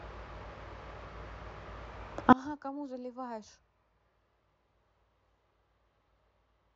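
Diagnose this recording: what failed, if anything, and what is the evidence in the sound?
From 2.33 s to the end, the speech collapses to a faint remnant about 27 dB quieter, with the centred voice almost gone. That is one channel inverted. A reversed-polarity lead in the analogue wiring is the likely cause, and the identical content cancels when the channels are summed to mono.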